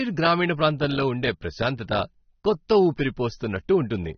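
From start to finish the speech carries plainly audible AAC compression damage, likely from a low-rate AAC-LC encode. Nothing gets through above about 6.3 kHz, so the top end is just gone and everything sounds dull and boxed in. The encoder is starving the spectrum to save bits, which fits a bitrate somewhere around 27 kbps, so what's left gets smeared, with a fizzy, warbly texture on sibilants and held sounds.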